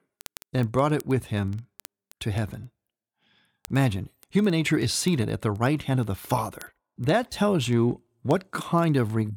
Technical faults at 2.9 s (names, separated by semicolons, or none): word clock ticks